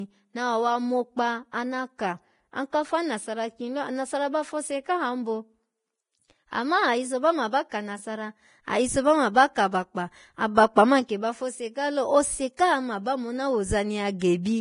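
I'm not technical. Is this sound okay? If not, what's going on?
No. Vorbis compression throughout: the speech sounds grainy and hissy, with nothing above 10.6 kHz, likely from heavy squeezing that turns fine treble detail into noise.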